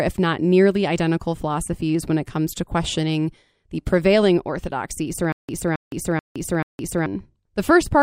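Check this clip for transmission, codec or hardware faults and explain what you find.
One playback fault is present, in the later part of the speech. There is a stutter with silent gaps from 5.32 to 7.06 s. The likely cause is a stalled stream or player that replayed the last fragment it held at each retry and then ran out of data. A 269 ms burst of sound repeats four times, each followed by 166 ms of digital silence, so it returns at an even 434 ms pace. The audio that belonged in that stretch is lost.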